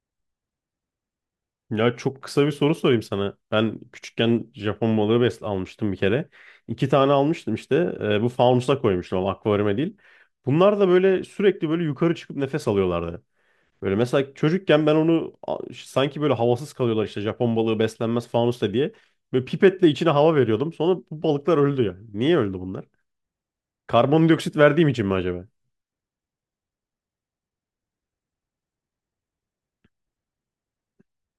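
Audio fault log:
Nothing to log here, as the speech runs along with no audible faults at any point.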